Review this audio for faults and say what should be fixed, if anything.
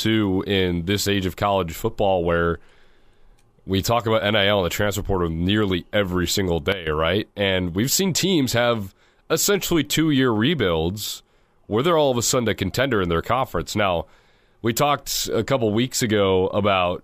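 A sudden gain jump occurs at 6.72 s, right after "portal nearly every single". The speech and the background noise drop together by about 11 dB in one step and stay down until 6.87 s. The likely cause is a gain change applied instantly, with no ramp. Ramping every gain change over a few milliseconds would prevent this.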